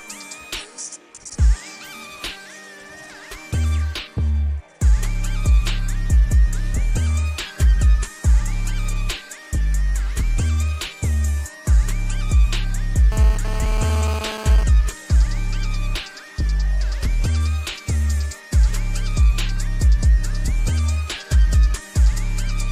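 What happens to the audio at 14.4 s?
A nearby 2G phone's data bursts, rectified by the audio circuitry, inject GSM phone buzz from 13.12 to 14.63 s: a harsh, raspy 217 Hz buzz that comes and goes, about 13 dB below the signal.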